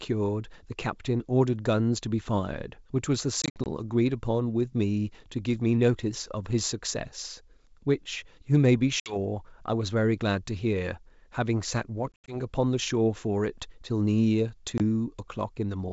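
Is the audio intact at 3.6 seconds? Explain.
No. From 3.42 to 3.66 s there is packet loss on an ADPCM call: around seven packets, 120 ms total, vanish over 240 ms, longest gap 60 ms. The decoder's predictor and step size desynchronise, so hard-edged silences give way to slightly distorted speech.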